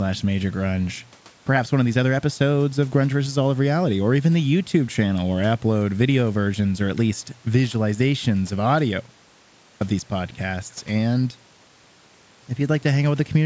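No technical faults can be heard anywhere in the recording. The speech has passed through call microphone processing, so nothing is present above 8 kHz, and a faint room noise sits about 35 dB below the speech.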